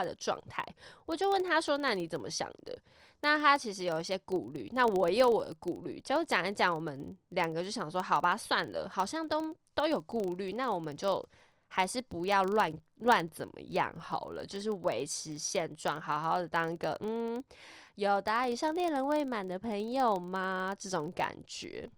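Filter restarted on every block, throughout the speech: the filter discards its memory at each block boundary and starts again from silence, so every 40 ms block opens with a small transient. The result is a 25 Hz buzz that rises and falls with the speech level.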